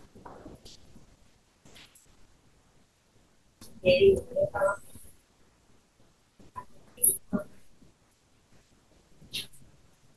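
Listening to the speech from beginning to end, nothing stood out as a technical fault at any point.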